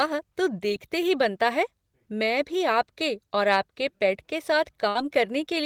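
At 0.68 to 0.71 s the speech briefly smears, a quick wobble lasting only a couple of hundredths of a second. This is short concealed packet loss. About 20 ms of audio never reached the decoder in time, so the receiver invented roughly 15 ms by extending the preceding sound, copying its pitch where it was voiced or using shaped noise where it wasn't, then crossfaded back into the real signal.

Right after "और आपके पेट के", at 4.89 to 4.96 s, the voice stalls into a short held sound that fades, and speech picks up slightly further along than it should. This is a burst of packet loss. About 60 ms of consecutive audio was lost or arrived too late to play. The receiver filled the gap with about 60 ms of the last sound, turning it down as it went, so that stretch of the utterance is gone.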